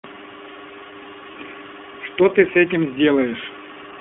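All the way through, the speech has that iLBC codec sound: band-limited to roughly 200 Hz to 3.4 kHz, plainly rough and a bit synthetic, which fits the 20 ms mode. Around 1.32 to 1.35 s there's a lost iLBC frame, likely a single dropped packet, patched by repeating the last pitch cycle as a brief buzzy held vowel before the voice comes right again almost at once.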